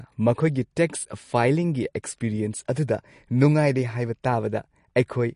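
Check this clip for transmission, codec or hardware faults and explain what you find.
One codec fault runs through the whole speech clip: the sound carries plainly audible damage, and nothing remains above 10.6 kHz. The hard treble ceiling and the artefacts point to lossy encoding, likely MP3 compression at a low bitrate, which fits roughly 40 kbps. With so few bits, the encoder discards the top band at a fixed cutoff and drops weaker spectral components. This thins the high end and leaves a processed, unsteady texture across the speech.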